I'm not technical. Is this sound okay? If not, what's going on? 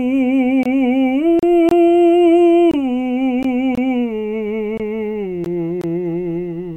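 No. This music has two kinds of brief dropouts.

The first is a gap between chunks. The music is delivered in pieces about one second long, and a short silence sits between each piece. You hear a tiny hole, about 23 milliseconds. It happens at 0.63, 1.69, 2.71, 3.75, 4.78 and 5.81 seconds. Nothing is missing. The music just stops briefly and then carries on.

The second is a gap at a join of encoded pieces. Here the music was prepared in separate two-second parts, then stuck together. Each part kept a little silence at its start and end. So a short hole opens, slightly blurred at the edges, and the music resumes where it left off. The first, at 1.39 seconds, lasts about 35 milliseconds. The others, at 3.43 and 5.44 seconds, last about 16 milliseconds.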